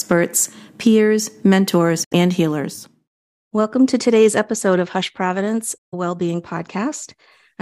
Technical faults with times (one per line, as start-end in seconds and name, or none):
2.04-2.13 Bluetooth dropout
5.78-5.94 Bluetooth dropout